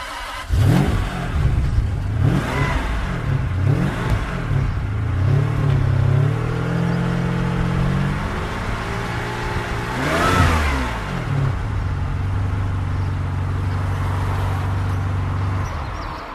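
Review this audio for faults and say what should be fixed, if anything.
At 4.10 s the sound skips forward abruptly: about a twentieth of a second is missing and the two sides are butted together. This is audio missing between chunks, likely from a recorder losing audio while switching to the next 6-second chunk. Unlike a dropout, it leaves no silent gap, only a jump in the sound. Double-buffering the capture, so that recording continues while one chunk is closed and the next is opened, would prevent it.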